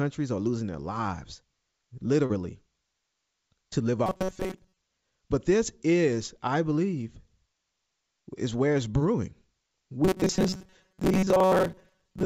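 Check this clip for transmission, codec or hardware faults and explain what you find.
Two kinds of fault turn up in this speech, both from the network side rather than the hardware. The call path's band limit is audible, with nothing above 8 kHz, which fits a wideband codec such as G.722.

Short concealed packet loss hits at 2.26 to 2.31 s and again at 8.91 to 8.95 s. A few tens of milliseconds of audio arrived too late, so the receiver extended the preceding sound to fill the gap and then blended back. You hear a quick smear or wobble.

Robotic sound from repeated short buffers runs from 4.06 to 4.78 s and then from 10.05 s to the end. It's likely caused by audio arriving too seldom, so the software loops a tiny slice, about 5.3 ms, over most of that stretch. That imposes a metallic 188 Hz buzz.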